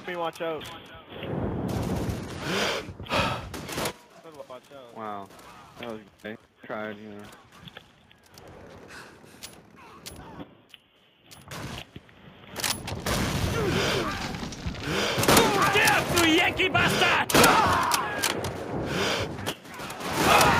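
Nothing technically wrong can be heard in this audio. The smooth level changes ride up and down gradually, like a fader being moved, with no abrupt steps or jumps.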